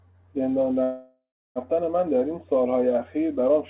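From 0.83 s to 1.59 s a call audio freeze halts the speech. The last sound trails on as a fading buzz or hiss, then falls silent for about 0.29 s, and speech resumes exactly where it stopped. This was likely a starved jitter buffer. Unlike packet loss, nothing is skipped; a 0.73 s gap is inserted.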